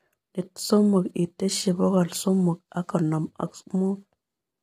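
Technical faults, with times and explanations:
Throughout, low-delay AAC compression: the speech sounds rough and grainy, with noise between harmonics and a synthetic top end, likely AAC-ELD squeezed to something like 24 kbps.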